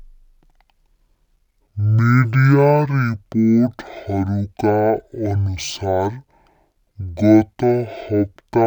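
From start to finish the speech has been affected by a stereo read as mono error: the playback chain treated the interleaved left and right samples as one continuous channel, so every stereo frame became two consecutive mono samples. Time is stretched by exactly a factor of two, giving speech at 0.5x speed and a full octave (12 semitones) lower, sluggish and deep, with a fainter mirrored copy of the sound folded into the upper half of the spectrum.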